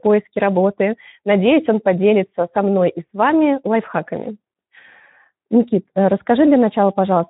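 Throughout, Speex codec damage leaves the speech hoarse and buzzy with nothing above 3.9 kHz, fitting a roughly 11 kbps setting. The starved excitation makes it rougher than a plain band limit.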